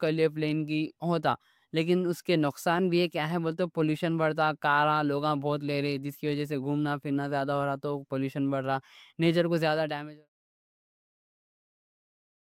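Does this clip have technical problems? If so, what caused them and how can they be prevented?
No, the speech signal shows no technical faults, and the ending is a smooth fade-out that begins around nine and a half seconds and reaches silence at about 10.3 s, with no click or hard edge.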